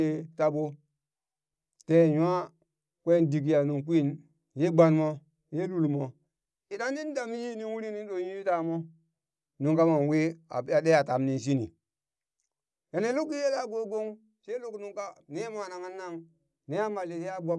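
No technical faults can be heard anywhere in the recording; the speech signal stays intact and continuous throughout.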